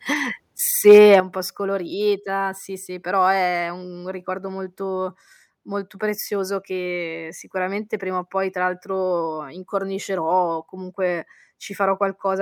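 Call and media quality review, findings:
Microphone overload, 0.87–1.16 s: harsh crackle on the loudest syllables, with peaks about 3 dB past the converter's limit. Likely cause: input gain set too high at the converter. Waveform: flat-topped peaks on a small fraction of samples. Spectrogram: broadband smear into the upper bands.

Microphone volume stepped down, 1.2 s, just before "po' scolorita sì sì". Voice and background drop about 8 dB at once, right after the clipped peak. Likely cause: call software's gain control reacting to the overload. Waveform: abrupt envelope step. Spectrogram: uniform darkening across all bands.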